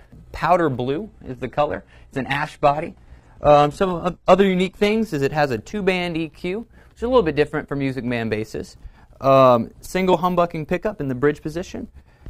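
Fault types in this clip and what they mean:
Adaptive stream at a lower bitrate: from 1.07 to 5.07 s the stream cuts abruptly, with no gap, to a much leaner encoding after the connection slows. Nothing above 12.3 kHz remains and codec artefacts thicken, which fits a low-rate HE-AAC version.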